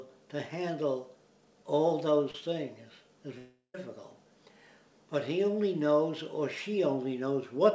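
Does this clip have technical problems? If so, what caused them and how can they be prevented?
Yes. At 2.31–2.35 s, short concealed packet loss: about 30 ms of audio arrived too late, and the receiver extended the preceding sound, leaving a brief smear, visible as a blurred vertical sliver on a spectrogram. A larger jitter buffer or forward error correction would prevent it.

From 3.38 to 3.75 s, a long network dropout is the likely cause: concealment continues the last sound as a decaying buzz or hiss for roughly a third of a second, including a flat, near-silent stretch of about 0.14 s, before real audio resumes with that section missing. On the waveform this shows as an amplitude envelope that fades to a flat line. A more stable connection with redundancy or retransmission would prevent it.

The band ends sharply at 8 kHz, which is consistent with G.722 at 64 kbps on the call path.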